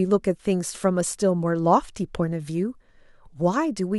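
No technical faults can be heard anywhere in this speech clip.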